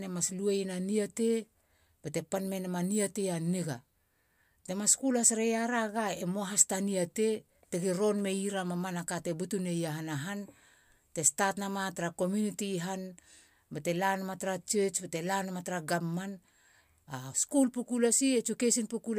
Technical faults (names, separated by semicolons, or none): none